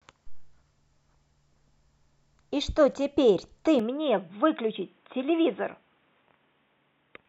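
Input switched to a poorer device at 3.79 s: the speech abruptly turns dull, losing everything above 3.8 kHz with faint new background noise, likely from a different microphone.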